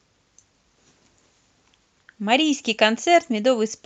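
No technical faults can be heard in this speech recording.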